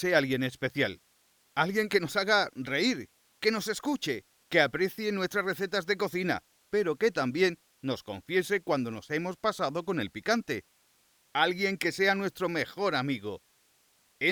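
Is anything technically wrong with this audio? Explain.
No, there are no technical faults to hear here.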